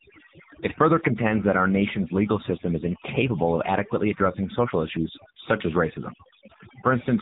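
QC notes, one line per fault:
Throughout: overdone noise removal. The background has dropped away with little twinkling specks in it. The noise reducer was pushed too hard, so it is pulling individual frequency bands down or out and taking the quieter parts of the voice along with the noise.
Throughout: AMR narrowband mobile codec. Everything stops at about 3.8 kHz, so the speech has that boxed-in phone sound. It is also buzzy and synthetic, because of the heavy low-rate coding at roughly 6.7 kbps AMR-NB. At that rate the vocal-tract model and the few pulses driving it leave little real detail.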